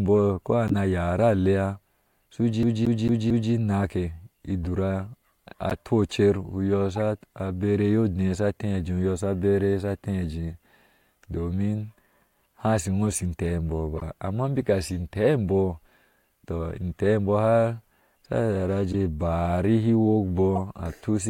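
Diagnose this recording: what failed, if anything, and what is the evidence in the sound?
Corrupt frame decoded, a codec-stage fault: short chirps and bursts of misplaced noise at 0.68–0.78 s, 5.70–5.73 s, 13.96–14.03 s (just before "amma beka"), 18.92–18.94 s and 20.55–20.60 s, each spanning a few frames and peaking roughly between -20 and -10 dBFS. Damaged bitstream data was decoded anyway, so wrong gains and codes put energy at the wrong frequencies. Unlike packet-loss concealment, which smears or repeats the preceding sound, these events add spurious, foreign-sounding content.

CD stuck on one turn, a playback-stage fault: from 2.63 to 3.53 s the same 224 ms slice of speech plays four times, with a brief mute at each jump. A scratch is sending the laser back one track on every rotation, and the fixed loop length gives the fast, even stutter of a skipping disc. A network jitter-buffer repeat is irregular and usually comes without the clean gap, so it does not produce this strictly periodic loop.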